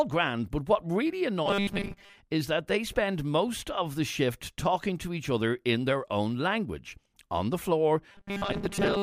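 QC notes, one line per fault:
1.46–2.17 s and 8.12 s to end: robotic sound from repeated short buffers. Speech after "grand but what really" and "language on the floor" turns into a rigid metallic buzz at 200 Hz. The likely cause is starved audio, with a 5 ms slice replayed over most of the real signal.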